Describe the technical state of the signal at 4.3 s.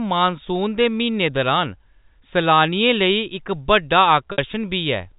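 At 4.32 s, just after "इक बड्डा", there is packet loss with pitch repetition lasting 60 ms, to 4.38 s. That span fits three 20 ms packets. The receiver fills the hole by repeating the last pitch period it received and fades that copy out over about 50 ms. The gap outlasts the fade, so a brief buzzy hold sinks toward silence before the speech cross-fades back in.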